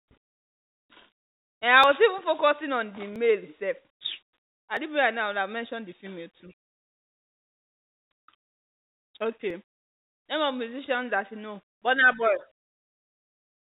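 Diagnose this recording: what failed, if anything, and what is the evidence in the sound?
Call processing: from 0.0 to 0.11 s the background is a steady, featureless hiss about 20 dB quieter, likely comfort noise in place of the background during a pause. A gate would leave silence instead.

Driver or buffer: jumps at 1.84 s (before "was even focusing on"), 3.16 s (after "even focusing on the"), 4.77 s (before "didn't realize now that") and 9.50 s. Each is likely a dropped buffer (overrun) losing roughly 10 to 20 ms. Unlike concealed packet loss, there is no gap or fill, only a direct splice.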